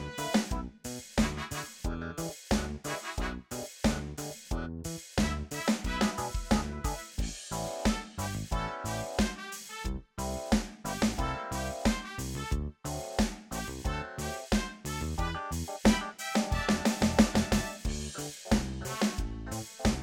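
No technical faults can be heard anywhere in the recording.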